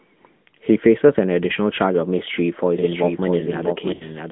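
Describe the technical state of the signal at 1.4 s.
At 1.4 s, as throughout the clip, the speech carries AMR narrowband mobile codec damage. A 10.2 kbps vocal-tract model rebuilds each 20 ms frame from sparse pulses, giving a plainly buzzy, synthetic tone. A spectrogram shows energy confined to roughly 150 Hz–3.4 kHz, blank above.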